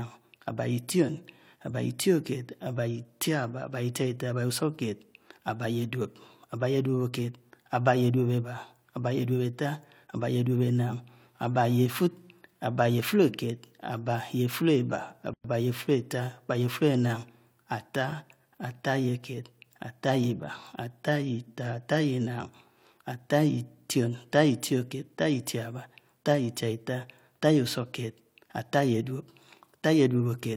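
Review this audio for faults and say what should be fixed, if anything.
A sudden 109 ms silence breaks the speech from 15.34 to 15.44 s, with softened edges: a gap at a join of encoded pieces, left by untrimmed encoder delay and end padding. Fix it by trimming each piece's encoder delay and padding before joining, or by encoding the whole recording in one pass.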